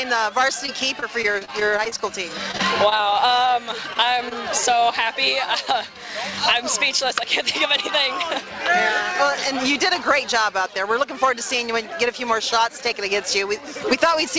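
From 0.66 to 2.01 s there is repeated packet loss with a robotic sound. Ten gaps, none longer than 28 ms, are each bridged by carrying the previous sound forward, so about 13% of the span is synthetic fill. The quick succession of holes gives a choppy texture with fragments missing. What separates this from an isolated dropout is the density: the patches recur before the ear can settle.

A second burst runs from 2.51 to 3.01 s, with four gaps of at most 21 ms and about 14% concealed. It has the same choppy quality.

A jitter buffer slow-down overlaps its tail, from 2.85 to 3.28 s. Here nothing is lost. Instead the receiver repeats pitch periods to rebuild its reserve, adding 46 ms and playing the stretch at 91% speed. Sounds drag out while the pitch stays put, sometimes with a faint warble. That unchanged pitch and the absence of gaps distinguish it from the choppy loss it overlaps.

Short concealed packet loss follows at 3.93 to 3.97 s and again at 4.29 to 4.33 s. 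Each time about 20 ms failed to arrive and was filled from the preceding sound, then crossfaded back. Each event is a single brief smear or wobble rather than a run of choppiness, and a brief transient can disappear. The call path leaves nothing above 8 kHz, which fits a wideband codec such as G.722.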